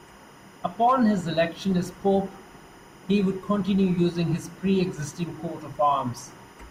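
Linear timecode running at 25 frames per second is leaking into the speech path from a neighbouring track or cable. Its square wave, flipping between tones around 1 and 2 kHz, sits well below the speech throughout as a steady, chirping warble.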